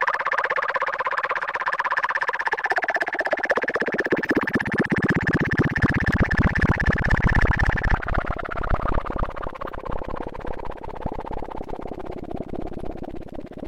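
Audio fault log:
Nothing stood out on listening to these sounds.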